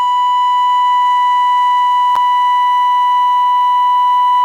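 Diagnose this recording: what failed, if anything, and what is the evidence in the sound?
The failure is at the codec stage: a gap at a join of encoded pieces at 2.16 s, a 9 ms gap in the continuous music. Separately encoded segments were spliced with encoder delay and end padding left in. Unlike a buffer dropout, the music resumes exactly where it stopped, with nothing skipped.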